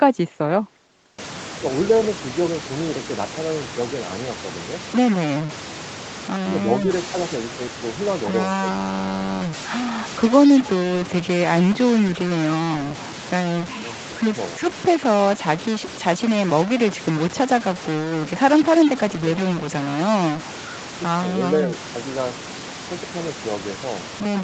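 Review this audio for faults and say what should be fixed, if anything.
From 1.19 s right to the end there's a distortion, and the pauses fill with gritty noise. That's a stuck bit, likely a converter or data line holding one bit fixed so about half the samples are off by its weight. Check the wiring and the ADC interface.

The speech dips in four spots while the far side talks: 1.55 to 4.74 s (shallow, about 5 dB), 6.44 to 8.64 s (about 10 dB), 13.6 to 14.6 s and 19.07 to 19.28 s (both about 25 dB, close to cutting out). That's speech suppressed in double talk, likely the echo canceller ducking everything when it couldn't tell the local talker from the loudspeaker echo. A better double-talk detector, or less aggressive suppression, should fix it.

Around 2.02 to 2.08 s there's a short, faint delayed copy of the voice, about 180 ms late and roughly 20 dB down. That's echo leak, likely residual loudspeaker pickup the far end's canceller didn't fully remove. 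Better far-end echo cancellation or a headset would stop it.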